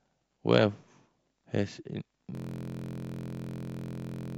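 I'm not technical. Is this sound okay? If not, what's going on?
No. From 2.35 seconds to the end, a system hang loop: the computer froze while the sound hardware replayed one 23-millisecond scrap, making a steady buzz.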